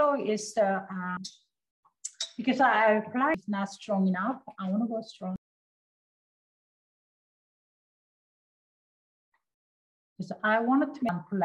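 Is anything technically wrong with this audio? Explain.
Yes. Damaged data in a compressed stream at 1.17, 3.34, 5.36 and 11.09 s: corrupted bytes make the decoder misread frames and lose sync until it finds the next frame header, heard each time as a very brief chirp or blip in the sound.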